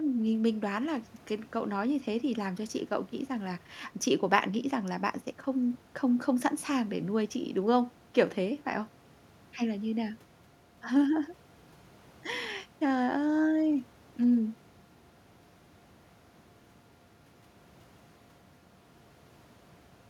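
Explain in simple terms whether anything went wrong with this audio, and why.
Nothing went wrong here.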